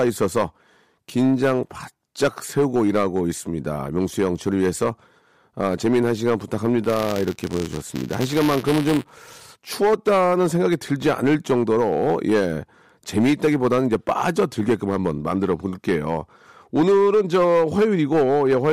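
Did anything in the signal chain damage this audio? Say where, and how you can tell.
Yes. Hard clipping runs through the whole speech clip, introduced at a converter or gain stage driven about 9 dB past full scale. A few percent of samples are sliced flat at the peaks, and those flat tops add high harmonics heard as crackle and fuzz on louder syllables.

Buffer tearing in the driver or buffer stage affects 6.84 to 9.45 s, heard as a robotic buzz at 188 Hz, which fits a 256-sample buffer. The writer and hardware reader have slipped, so a small slice of each period holds audio roughly one lap old, with hard joins.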